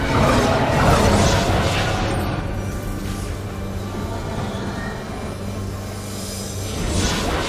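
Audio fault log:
3.98–7.26 s GSM phone buzz: a nearby 2G phone sending data transmits in bursts 217 times a second, and the rectified pulses give a raspy, harmonic-rich buzz about 16 dB below the signal that comes and goes.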